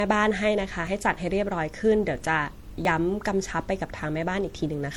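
Running through the whole clip, the speech has likely been transcoded between lossy codecs, with an earlier low-rate codec such as HE-AAC followed by MP3 re-encoding at a modest bitrate. The second encoder spends its bits re-coding the first encoder's errors while adding its own, so two kinds of artefact sit together. Nothing is present above 18.4 kHz.

At 0.87 s and again at 2.85 s there is audio missing between chunks, likely from a recorder or processor that handles the signal in blocks of about 2 s and drops a sliver each time it closes one block and opens the next. Roughly a fiftieth of a second disappears at each point, and the two sides are butted together with no gap. The speech jumps forward abruptly.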